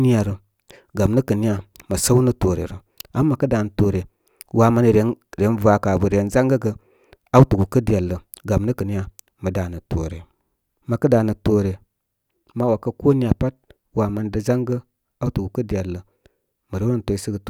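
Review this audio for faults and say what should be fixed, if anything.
Nothing needs fixing, since the signal shows no technical faults anywhere in the recording.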